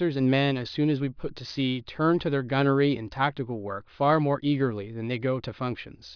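Nothing stood out as a technical problem on listening to the speech.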